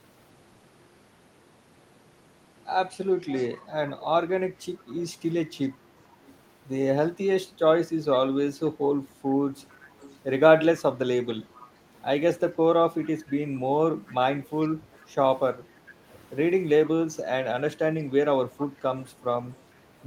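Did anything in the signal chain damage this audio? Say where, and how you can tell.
Yes. Echo leak at 3.27–3.62 s, 4.88–4.94 s, 6.27–6.34 s, 9.56–10.19 s, 11.55–11.69 s, 14.08–14.12 s, 14.94–15.06 s and 18.59–20.05 s, in the call-processing stage: a faint copy of the speech returns 445 ms late, about 20 to 35 dB below it. The fixed delay likely means the far end's echo canceller let loudspeaker pickup from its microphone through and sent it back.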